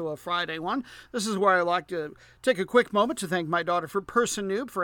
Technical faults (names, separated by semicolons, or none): none